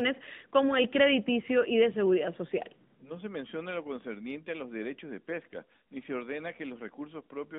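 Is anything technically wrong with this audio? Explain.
Yes. Throughout, it's AMR narrowband mobile codec audio: speech squeezed into roughly 150 Hz to 3.7 kHz, with plainly audible buzzy, synthetic coding damage that fits a mid mode around 10.2 kbps.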